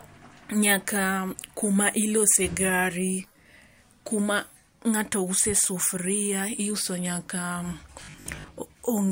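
From 8.04 to 8.48 s, new audio was likely arriving too seldom, so the playback side kept filling the gaps by looping its most recent short buffer, around half of the material in that span being repeats while the real speech in between was skipped. The 50 Hz repetition rate fits a 20 ms buffer. The result is robotic sound from repeated short buffers: a stiff, metallic 50 Hz buzz that loosely tracks the speech.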